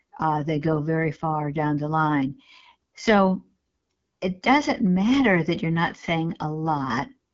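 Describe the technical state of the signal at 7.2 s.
At 7.2 s the speech still carries the AMR wideband (HD Voice) codec damage present for the whole clip. A pulse-driven vocal tract model rebuilds the lower band, and only shaped noise sits above it, with nothing above about 7.6 kHz. The rough, raspy texture fits the 8.85 kbit/s mode. Unlike narrowband phone coding, which cuts off near 3.4 kHz, the upper band is kept, but its hiss is noise rather than detail.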